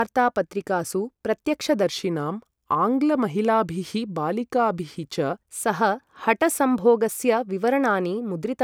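From 1.83 s to 5.38 s the samples are clocked out slower than they were captured, with no rate conversion in between: a wrong sample rate. The slowdown points to 48 kHz material being played at 44.1 kHz. Speed and pitch fall together, so the speech runs at about 0.92 times normal speed and sits about 1.5 semitones low, sounding slightly slow and deeper until normal playback resumes at 5.38 s.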